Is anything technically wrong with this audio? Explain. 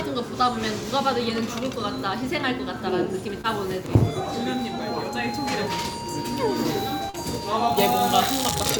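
Yes, there's short concealed packet loss at 3.41 and 7.10 s: about 20 and 40 ms never arrived, so the receiver extended the preceding sound, leaving brief smears.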